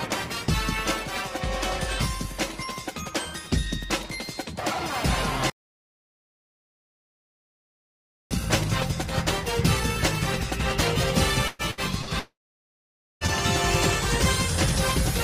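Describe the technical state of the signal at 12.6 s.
At 12.6 s the signal is inside a long network dropout running from 12.19 to 13.24 s. The audio likely stopped arriving for about a second. The last sound trails off as a fading buzz or hiss, then about 0.87 s of silence follows before audio resumes.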